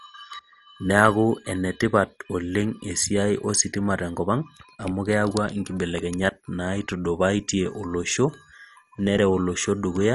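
From start to finish, the speech sounds dull and plainly gurgling, with a granular edge. Nothing is heard above about 11.3 kHz. Upper detail seems to come and go as if parts of the spectrum switch on and off. The likely cause is MP2 compression at a low rate, which fits roughly 48 kbps. Short of bits, the encoder drops whole upper sub-bands and quantises the remaining bands coarsely.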